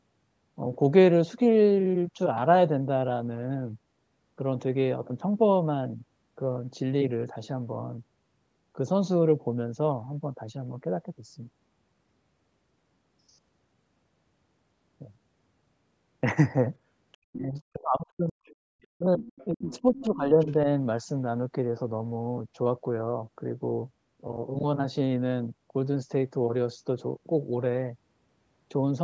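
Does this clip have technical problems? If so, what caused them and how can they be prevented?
Yes. There is faint other side's voice leaking through at 17.13 to 17.17 s, 17.55 to 17.60 s, 18.45 to 18.87 s, 19.26 to 20.04 s and 20.41 to 20.53 s. It is quiet, from about 35 to 40 dB below the speech in the first scraps up to about 20 dB below at 19.26 s. The likely cause is a loudspeaker feeding the microphone, with the echo canceller leaving some of it behind. Using a headset, or lowering the loudspeaker volume, would prevent it.

There is also speech suppressed in double talk, from 17.3 to 18.36 s and again from 18.92 to 20.67 s. The talker's voice dips sharply while the other side plays on the loudspeaker, by roughly 40 dB at worst in the first stretch and about 25 dB in the second. Around a second of each stretch is affected. The echo canceller likely could not tell the talker from the echo, so it turned both down. 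A headset removes the echo path, so the canceller has no reason to duck the talker.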